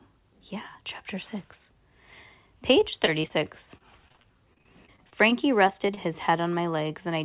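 From 2.8 to 3.32 s, then again from 3.78 to 5.99 s, repeated packet loss (robotic sound) breaks up the speech. Short holes, up to 21 ms and then 33 ms, are bridged by extending the preceding sound, producing choppy delivery with fragments missing, all within a narrowband call path topping out at 4 kHz.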